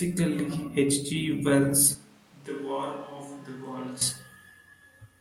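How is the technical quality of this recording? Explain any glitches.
The recording has one clear glitch, a switch to a distant microphone. From 1.95 to 4.01 s, the speech suddenly turns roomy and hollow, loses bass, drops about 10 dB and sits over louder background noise, roughly 25 dB below the speech. The close microphone likely dropped out, leaving a farther one. Unlike a simple level dip, the tone and room sound change abruptly at both edges.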